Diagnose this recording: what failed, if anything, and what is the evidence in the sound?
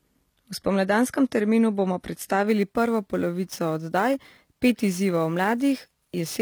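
Sibilants sound gritty and lispy throughout, with nothing above 14.9 kHz. This is likely HE-AAC compression at the codec stage, fitting a low bitrate near 24 kbps, with the treble rebuilt from copied lower bands.

From 2.47 s, just after "spomladanskem terminu bomo", to the end at 6.41 s, a hiss-like roughness follows the loud and bright sounds at about 25 dB below them. This is sample clock jitter at the converter: timing errors of around ten microseconds.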